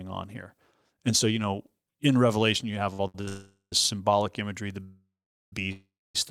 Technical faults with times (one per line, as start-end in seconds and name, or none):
2.93-3.28 short stall from a late packet
3.28-3.73 call audio freeze
4.84-6.15 call audio freeze